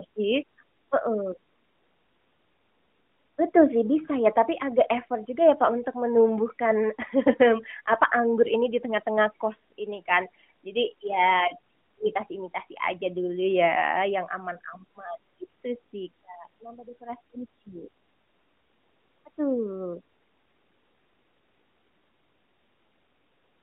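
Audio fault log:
15.44–15.47 s, AMR bit errors: for about 30 ms the narrowband mobile speech turns briefly hoarse and gargly while its pitch and level hold roughly steady. Flipped bits in the weakly protected parts of the codec frames, at an error rate of a few percent, misplace the excitation pulses and skew the fine gain and spectral values. A spectrogram shows a smeared, noisy patch inside the 200–3400 Hz band, and the waveform shows ragged, irregular cycles.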